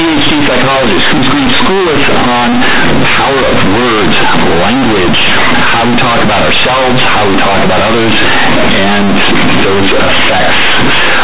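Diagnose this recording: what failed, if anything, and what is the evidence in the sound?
Sample-format conversion: companded audio read as linear, mu-law played as 8-bit samples throughout, so speech buzzes, pauses roar with noise, and the waveform is bent out of shape.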